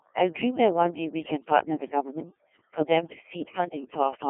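Right from the start and all the way through, there's overdone noise removal at work. Whatever the background was, it's been pushed down, with little twinkling specks left where individual frequency bands flick on and off around the noise estimate. The quieter parts of the speech got caught in that gating too, with soft edges of syllables pulled away along with the noise.

On top of that, the whole thing has gone through a Codec 2 vocoder, and the damage is heavy. Nothing of the original waveform survives. The voice is rebuilt from sine waves driven by pitch, voicing, energy and a rough spectral envelope, so it sounds robotic and buzzy. The quality points to one of the lower rates, around 1.6 kbit/s. The band is squeezed into a phone-style 200 Hz to 3.4 kHz window, and there's nothing at all above 3.6 kHz.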